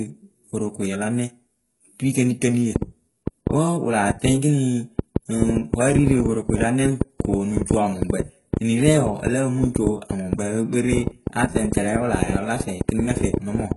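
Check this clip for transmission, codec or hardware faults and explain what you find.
Two faults are present: codec damage across the whole clip and a train of clicks through most of it.

The first is heavy HE-AAC compression throughout. Nothing is left above about 11.4 kHz. The treble that remains is rebuilt by band replication, copied up from lower bands rather than coded. Its harmonics do not line up with the lower spectrum. Sibilants sound gritty and metallic. The damage fits a very low bitrate, around 12 kbps. The cause is likely this codec.

The second is a train of clicks from 2.76 s to 13.73 s. Roughly seventy similar pulses sit over the speech and in the pauses. They come at about 6.5 per second, at an uneven pace. They peak about 15 dB above the speech and are heard as ticking. The likely cause is interference from nearby equipment or a faulty connection or power supply injecting repeated pulses.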